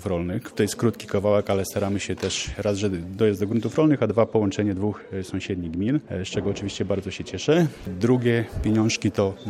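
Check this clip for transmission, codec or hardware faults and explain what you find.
One fault is present. From 3.8 to 7.5 s, de-emphasis applied wrongly: a treble-cut curve hits audio without matching pre-emphasis, dropping 10 kHz about 10 dB, leaving the sound dull and muffled.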